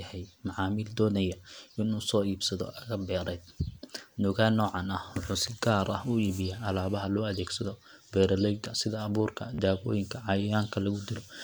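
A speech recording with two distinct faults. From 5.82 to 7.04 s, starting after "noocan ah wuxuu si" and ending before "loo adeegsado beeraleyda sida", a GSM phone buzz sits under the speech: a hard, raspy tone at about 217 Hz, rich in harmonics, roughly 27 dB below the speech level. A nearby 2G handset transmitting in bursts at that rate produced radio pulses that the audio circuitry rectified into audible sound. The pattern points to a data transfer rather than a call. At 9.54 to 9.59 s, just after "adeegsado beeraleyda sida abuurka", a Bluetooth stutter breaks the audio. About 40 ms of signal went missing, which fits roughly three lost or late packets. The receiver filled the gap by replaying its last short buffer, so a brief repeated fragment is heard as a quick rattle. When fresh data arrived, playback resumed further along, as though the missing stretch had played through.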